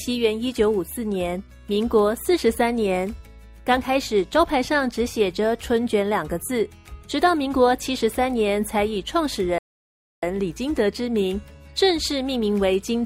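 A rebuffering stall runs from 9.58 to 10.23 s. The player used up the audio it had already downloaded and had to halt until more data arrived, so the sound drops abruptly to silence for about 0.65 s. When playback picks up again it continues from exactly the point where it stopped, with nothing skipped or repeated. The fault loses no material but inserts roughly two-thirds of a second of dead air into the timeline.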